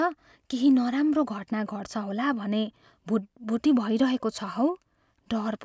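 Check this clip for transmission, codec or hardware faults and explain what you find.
No fault can be heard anywhere in this speech recording. There is nothing here that calls for further explanation.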